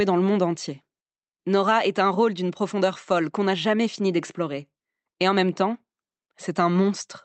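Nothing stood out as a technical problem on listening to this speech, which reaches the listener over an ordinary call connection.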